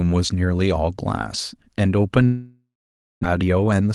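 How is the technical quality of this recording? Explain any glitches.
The speech has two connected glitches near the end: a long network dropout followed by a burst of jitter buffer speed-up. Both sit on top of a call-codec path whose 12 kHz band limit and usual coding noise are consistent with Opus at around 32 kbps.

From 2.25 to 3.25 s there is a long network dropout, likely caused by packets failing to arrive for well over half a second. Lacking fresh audio, the receiver kept extending the last sound for about 0.98 s. That continuation decays into a fading buzz or hiss, then about 0.55 s of near-silence. About 0.64 s of real speech is simply gone, and the sound resumes with that gap never recovered. The stall also leaves the buffer holding roughly 0.3 s of extra delay.

From 3.33 to 3.92 s comes the jitter buffer speed-up, as the receiver works off that backlog. The buffer held more audio than it wanted. 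It trimmed away short slices of one or a few pitch periods, repeatedly, about a tenth of a second in total. The speech therefore plays at roughly 114% of normal rate without any pitch change, sounding noticeably rushed over that final stretch.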